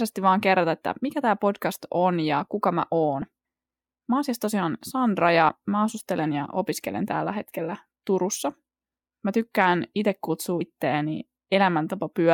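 At 3.22 s, just after "on ja kuka mä", and 5.49 s, just before "mä asustelen ja opiskelen", the speech skips about 30 ms as compressed frames go missing, which fits 32 ms frames. At 10.61 s, after "tykkään itse kutsua", roughly two frames drop.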